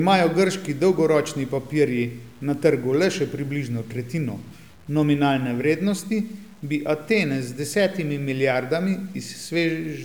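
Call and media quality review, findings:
Low bit depth without dither, whole clip, 0 to 10 s. Grainy, signal-following distortion on the speech, worst on quiet tails, which go gritty or sputter out to silence. Grit sits roughly 35 dB under the speech. Probable component: a format conversion stage, likely plain truncation to 8 bits with no dither, so the error tracks the waveform instead of staying a steady hiss.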